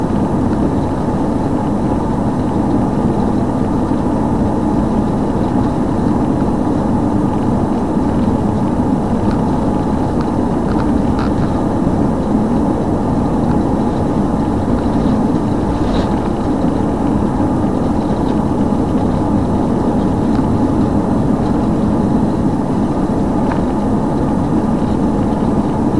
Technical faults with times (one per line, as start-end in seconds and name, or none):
none